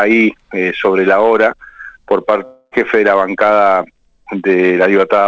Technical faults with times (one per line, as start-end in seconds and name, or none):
2.45-2.74 long network dropout